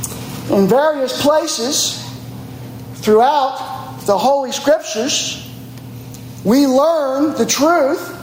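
Gain pumping runs through the whole clip. The gain ducks by roughly 20 dB under loud sounds, likely from excessive gain feeding a fast limiter.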